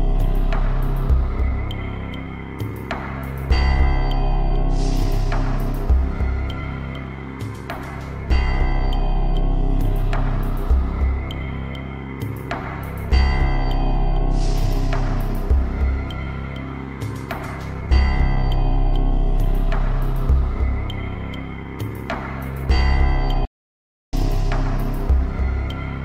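At 23.45 s the sound halts mid-flow and stays silent until 24.13 s, a playback stall of about 0.68 s, likely from the player running short of data or its thread being blocked. A dropout is a brief gap, but this is a long, clean silence.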